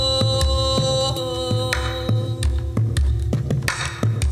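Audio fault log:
No faults were heard in the audio. Nothing in it calls for an entry in this log.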